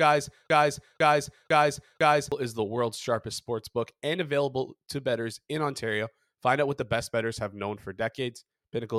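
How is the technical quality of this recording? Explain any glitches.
The recording opens with one clear glitch. Broken-record loop, 0 to 2.32 s: already under way as the clip begins, a 0.5 s fragment of speech repeats four times back to back, likely because playback or streaming stalled and resent its last buffer, losing the speech that should have played.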